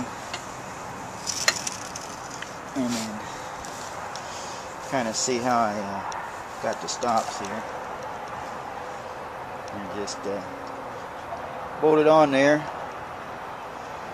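Nothing goes wrong anywhere in this one, so there's no fault to point to at any moment.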